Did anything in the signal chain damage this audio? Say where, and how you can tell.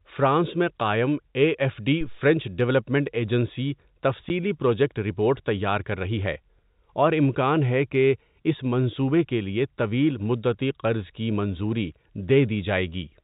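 Yes. At 2.01 to 2.24 s there is a deep, low thump that dies away within about 53 ms of its onset. This is a phantom power thump in the analogue wiring. A supply was switched on a live input, and the voltage step passed through the coupling capacitors as a single low-frequency pulse.

At 4.29 s the speech drops out for 10 ms, with hard edges at both ends. This is packet loss filled with silence in the network stage. The gap fits one lost 10 ms packet that the receiver replaced with digital silence. The band-limited G.711 telephone coding underneath does not cause it.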